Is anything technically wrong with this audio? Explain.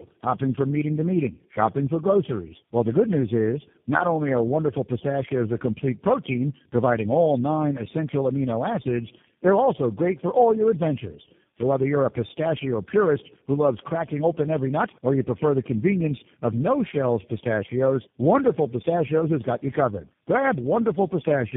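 Yes. The speech suffers from tandem speech coding throughout. The sound points to four low-rate speech coders in a row, consistent with two GSM full-rate passes, a G.723.1 pass and a final G.729A, with G.711 links between. Each coder re-models the previous one's already damaged output, so the errors compound into a rough, muffled, warbly voice. A spectrogram shows nothing above 3.7 kHz and smeared, blotchy formant bands.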